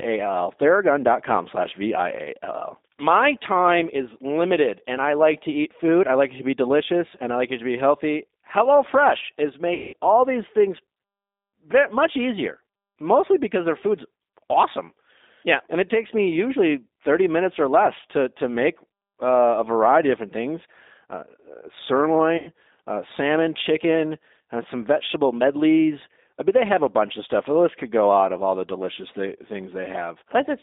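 Speech runs through the whole clip sounding thin, slightly rough and synthetic, with nothing below about 250 Hz or above 3.7 kHz, and the codec damage is plainly audible. That is the G.729 codec at 8 kbit/s, which discards the waveform and rebuilds each 10 ms frame from a vocal tract filter, a pitch predictor and a few pulses, so fine detail comes back buzzy and approximate. Twice the sound smears into a fading buzzy tone or coloured noise, from 9.74 to 9.94 s and from 22.37 to 22.51 s. This is VoIP packet loss concealed by the speech codec. With packets missing, the decoder keeps extrapolating its last pitch and filter while turning the gain down. The lengths point to roughly 190 ms and 100 ms of lost audio. Because each frame builds on the previous one, the speech stays weak or distorted for a short while after packets resume.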